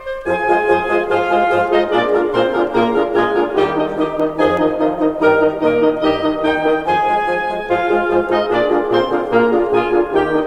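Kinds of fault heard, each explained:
CD scratch ticks: a scratch defeats error correction once per disc revolution, so concealed samples leave five ticks, the longest about a millisecond, between 4.20 and 4.95 s.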